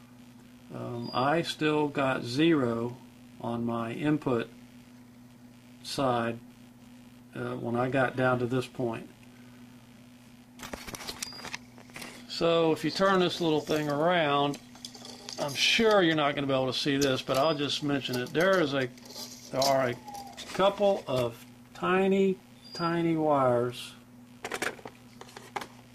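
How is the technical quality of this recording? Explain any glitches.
The recording carries one persistent fault. Computer activity noise runs throughout: a faint buzz pulsing around 70 times a second, roughly 35 dB below the sound, caused by processor or graphics load disturbing the shared audio ground.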